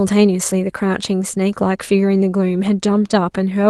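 Listening to this short speech recording, carried over a call path with an Opus codec, nothing stood out as a technical problem.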